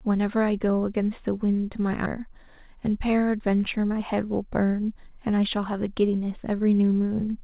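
From 3.83 to 6.83 s there is a jitter buffer speed-up. The receiver's buffer held more delay than it aims for, so it cut short pitch-period pieces again and again, roughly a third of a second in all. The speech runs 9% faster at the same pitch and sounds hurried.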